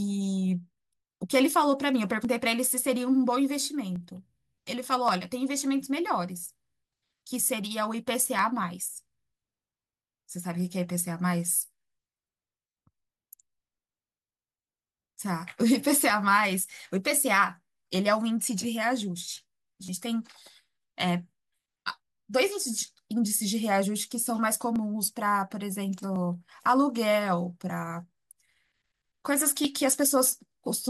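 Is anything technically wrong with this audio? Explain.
Yes, there are three repeated buffer faults in this speech, at 4.54–4.58 s, 19.86–19.88 s and 26.64–26.66 s. Playback ran dry, so the device replayed its last chunk of about 10.7 ms, which fits a 512-sample buffer. The chunk repeats three times at the first spot and twice at the others, a brief buzzy click with roughly 30 ms or 20 ms of speech lost. On a waveform, identical short segments tile with hard seams. A spectrogram shows vertical lines at each join, with harmonics at about 94 Hz during the buzz.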